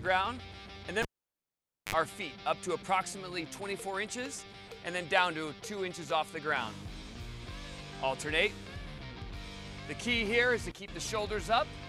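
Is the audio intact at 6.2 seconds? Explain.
Yes, the audio is intact at 6.2 seconds, with no dropout, glitch or other fault audible at that moment.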